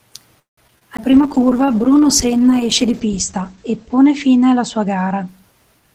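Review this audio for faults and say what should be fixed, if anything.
Call audio freeze, 0.39 to 0.59 s. The sound stops moving forward. The last sound carries on as a fading buzz, then about 150 ms of silence. The likely cause is packets held up in transit, which left the jitter buffer empty. The receiver filled about 181 ms this way. Nothing was lost. The audio resumes where it stopped, so everything after it now runs about 181 ms later. To prevent it, give the jitter buffer more headroom on unstable network paths.

Short concealed packet loss, 0.67 to 0.77 s and 0.79 to 0.83 s. Each event removed 20 ms of audio that never reached the decoder in time. The receiver patched each hole by extending the preceding sound and then blending back into the real signal. The result is two brief smears close together. The first patch added around 20 ms to the timeline. To prevent it, enable forward error correction so single lost packets can be rebuilt.

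CD skip at 0.97 s. There is a tick and a mute of roughly 15 ms. Then the audio jumps to a different point. The laser lost its track and landed on another turn of the disc's spiral. The jump therefore equals a whole number of disc turns, which is 0.1 to 0.3 s per turn. To prevent it, clean or replace the disc and isolate the player from knocks.

Call bitrate drop, 1.10 s to the end. The encoder rate falls from 48 to 9 kbps. It stays at its lowest for about 2.1 s. Audio bandwidth shrinks from 20 kHz to 8 kHz, so the top end is cut off. The sound turns muffled and rough for the rest of the clip. The cause is a collapse in the call's bandwidth estimate. To prevent it, set a higher minimum bitrate and check the network path for congestion.

Jitter buffer speed-up, 5.79 s to the end. The audio plays at about 153 percent speed with its pitch unchanged. The buffer had filled past its target. To bring the delay back down, the receiver cut out short pitch-period slices repeatedly, about a tenth of a second in total. 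This makes the final moments sound hurried. To prevent it, stop packets from arriving in bursts, or tune the buffer to shrink more gradually.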